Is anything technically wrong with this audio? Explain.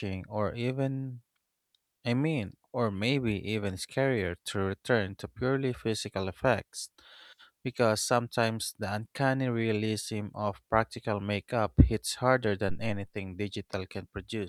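Yes, there's a phantom power thump near the end of this speech clip, from about 12.69 s to 13.16 s. It sounds like someone switched the supply on a live input, so a sudden DC step hit the coupling capacitors and came out as a low, deep bump. It peaks at about −23 dBFS, well short of clipping, and dies away quickly, with a decay of around 106 ms, so you hear a short, soft thud rather than a boom.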